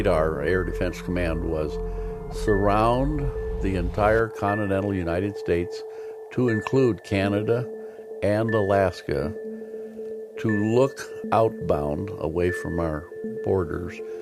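No technical faults can be heard at any point in the audio.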